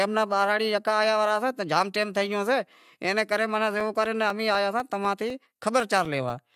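From about 3.80 s, right after "شے ایں نے کرے", periodic USB or driver dropouts set in and run to 6.30 s. Every 0.25 s a tiny slice, a couple of milliseconds, drops to silence, so the speech picks up a steady string of around ten small ticks.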